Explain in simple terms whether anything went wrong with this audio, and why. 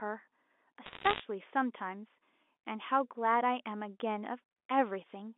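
A burst of sharp ticks and crackle sits over the speech from about 0.86 to 1.20 seconds. These are bit errors on a digital phone line: roughly one bit in a hundred arrived flipped, and each flip knocks one sample out of place; a flip in a high bit produces a click.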